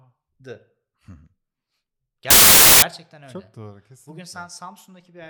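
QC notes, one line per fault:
2.30–2.82 s, file tags played as audio: a hard-edged burst of very loud white noise cuts into the speech for about half a second. An embedded cover picture, stored as compressed data, was read as samples. Compressed bytes look random, so they play as loud static.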